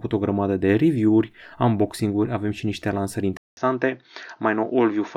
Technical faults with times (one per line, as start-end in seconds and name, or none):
3.37-5.17 input switched to a poorer device